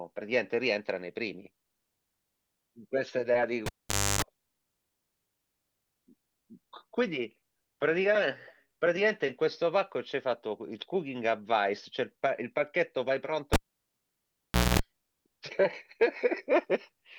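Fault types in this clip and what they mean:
Cable pulled and plugged in: Someone yanks a live lead out and shoves it back, and you hear it twice. At 3.66 s there's a pop, about half a second of near silence, then roughly 0.3 s of 50 Hz mains buzz while just the tip makes contact, and a second pop as the sound comes back. At 13.53 s it's the same, but the gap runs about 1.2 s and the buzz is 60 Hz for around 0.23 s.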